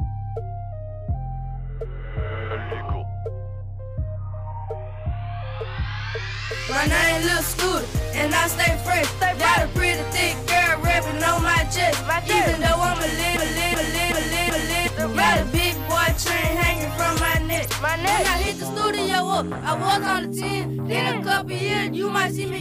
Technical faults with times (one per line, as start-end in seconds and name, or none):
13.37-14.88 broken-record loop